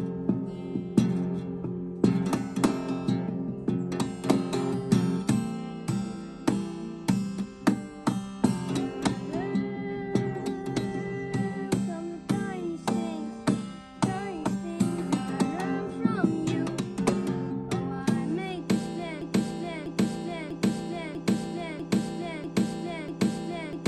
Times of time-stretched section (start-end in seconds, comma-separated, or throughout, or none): none